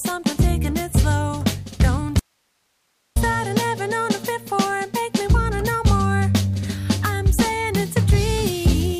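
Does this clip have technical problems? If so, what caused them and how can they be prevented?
Yes. From 2.20 to 3.16 s there is an audio dropout to a faint residue: the sound cuts out abruptly for about 0.96 s, leaving only hiss roughly 50 dB down. The source feed likely broke while the path after it stayed live. Secure connectors and a monitored input feed prevent it.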